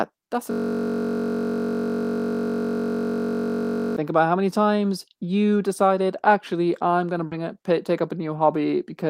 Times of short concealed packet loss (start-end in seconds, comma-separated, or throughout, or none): 7.27-7.33